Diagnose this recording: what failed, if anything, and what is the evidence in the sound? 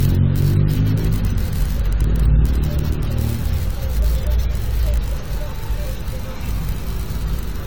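The codec stage: swirly, smeared, hollow texture throughout, blurred attacks. Likely generation loss, roughly seven AAC-LC re-encodes at around 96 kbit/s, stacking quantisation noise and spectral holes.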